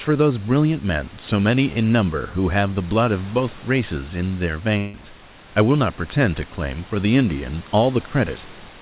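It's a speech clip, and at 4.78 to 4.96 s the sound smears into a fading buzz or hiss for about 0.16 s before resuming with a chunk gone, likely a long network dropout the receiver papered over.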